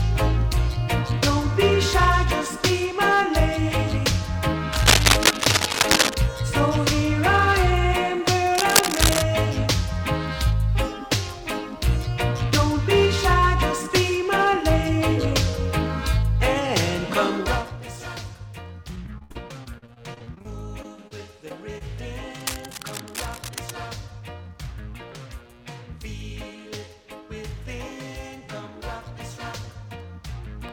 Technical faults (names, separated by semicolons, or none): cable scratch noise; repeated packet loss (robotic sound); short concealed packet loss